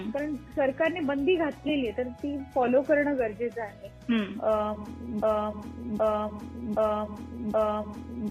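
At 5.23 s the audio falls into a broken-record loop: a 0.77 s fragment repeats exactly, back to back, four times through to the end. The likely cause is a stalled player or stream resending its last buffered piece, so the intended audio is lost.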